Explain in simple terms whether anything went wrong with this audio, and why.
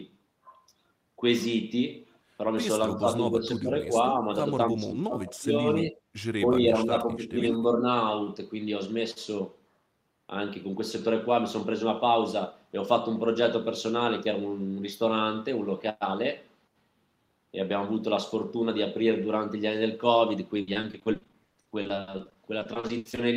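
Between 2.95 and 7.84 seconds the speech keeps dipping in volume and partly dropping out, in six patches: 2.95 to 3.06, 3.32 to 3.94, 4.21 to 4.28, 4.70 to 5.55, 5.74 to 5.96 and 6.44 to 7.84 seconds. The deepest dip is around 4.70 to 5.55 seconds. This is most likely speech suppressed in double talk: both sides spoke at once, and the echo canceller mistook this talker for echo and turned them down.

From 20.61 to 23.19 seconds the speech turns choppy and robotic, with dozens of tiny holes, the longest about 80 ms. Roughly a third of that stretch is filled in rather than real. This is repeated packet loss (robotic sound): pieces of the audio went missing in transit over and over, and each hole was patched by stretching the sound just before it, which gives the choppy quality.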